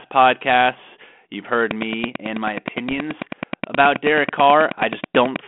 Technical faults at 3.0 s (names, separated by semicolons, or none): train of clicks; bit errors on an ADPCM link